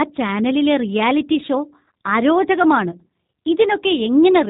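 G.729 codec coding runs through the whole speech clip, from first sound to last. The audio is rebuilt from a vocal tract filter, a pitch predictor and a few sparse pulses per short frame rather than carried as a waveform, which leaves the speech intelligible but plainly rough and synthetic. Nothing survives above 3.8 kHz, so sibilants and consonant edges sound dull. The overall character fits a low-rate coder of around 8 kbit/s, most likely the G.729A variant.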